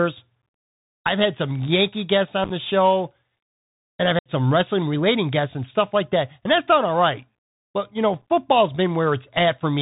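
Throughout, the speech carries the Bluetooth CVSD headset codec's plainly audible damage, consistent with a 64 kbps CVSD link. The one-bit delta coder's adaptive step lags on loud high sounds, so sibilants turn scratchy over a granular hiss, and a spectrogram shows nothing above 4 kHz.

Unconcealed Bluetooth headset packet loss then strikes three times. From 2.44 to 2.51 s, about 34 ms of audio vanishes in scattered gaps across 60 ms, the longest 7.5 ms, roughly ten packets, heard as a brief crackle. At 4.19 to 4.31 s, about twenty packets, 67.5 ms in total, drop out, and the voice returns quieter for a moment. From 8.22 to 8.30 s, 45 ms goes missing across 82.5 ms, with runs up to 11.2 ms, making the sound rough and chopped. On the waveform these appear as flat, square-edged holes, and on the spectrogram as thin vertical blank stripes.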